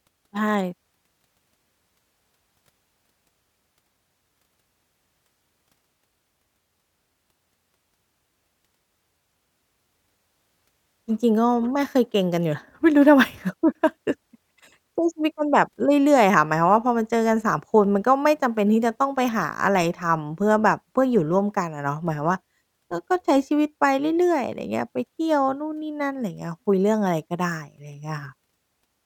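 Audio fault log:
Nothing stood out on listening through the speech.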